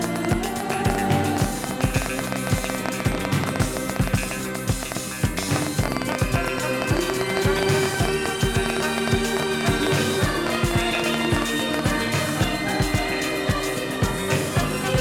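From 0.04 s to 11.80 s, a rapid ticking runs over the sound at about 9.4 clicks per second, unevenly spaced and roughly a hundred in all. The pops share much the same sharp shape and stand out by around 15 dB above the audio, audible through quiet gaps too. This train of clicks most likely comes from interference from nearby equipment or a faulty connection or power supply injecting repeated pulses into the signal.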